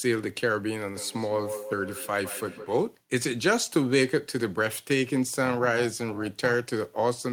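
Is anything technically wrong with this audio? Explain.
Yes, the speech has two separate faults.

Feedback echo between two devices, from 0.94 to 2.9 s: two devices in the same room share the call, and one plays back what the other's microphone sent. That microphone hears the playback and sends it round again. Neither echo canceller removes it, because each handles only its own output. The speech returns roughly every 150 ms as a thin, ringing repeat. The loudest repeat sits about 11 dB below the direct speech.

Overlap-add ripple, from 5.45 to 6.55 s: the audio was split into windowed frames and rebuilt with an overlap that doesn't add up to a steady gain. The level therefore swells and dips once per frame, about 6 dB deep, at a rate of around 300 Hz. At that speed the ripple is heard as a metallic buzz with extra tones around the speech rather than a slow pulsing.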